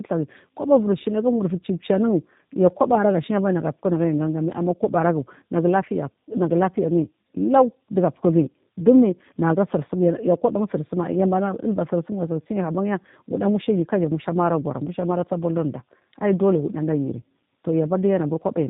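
Tandem speech coding runs throughout: the speech appears to have passed through two low-rate speech codecs in turn, which fits an AMR narrowband leg followed by G.729A, the second re-coding the first's damage. Nothing survives above 3.8 kHz, and the speech sounds muffled, rough and warbly.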